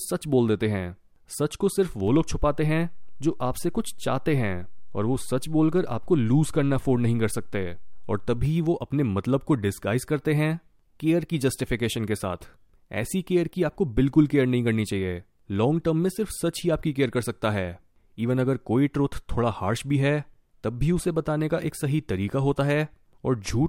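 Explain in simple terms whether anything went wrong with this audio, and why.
A DC step happens at 2.08 seconds and lasts until 8.45 seconds. At 2.08 the waveform's resting point, its zero line, suddenly jumps to a new level, the way it does when a converter recalibrates or an input with an offset gets switched in. That sudden shift is heard as a low thump or click. The offset holds until 8.45, then steps back, giving a second thump. Throughout, the speech itself carries on unchanged.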